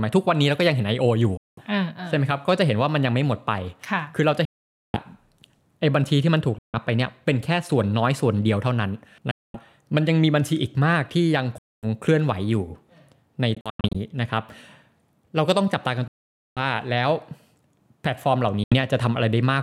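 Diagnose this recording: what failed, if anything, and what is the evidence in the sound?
The speech cuts to silence eight times, at 1.37, 4.45, 6.58, 9.31, 11.58, 13.55, 16.08 and 18.64 s, with each gap lasting between about 0.08 and 0.49 s. At 13.55 s the loss breaks into short holes spread over about 0.4 s. This is likely a Bluetooth dropout on the wireless playback link: late packets were discarded, and the sound resumes further along, skipping what was missed. Waveform and spectrogram both show near-silent vertical gaps.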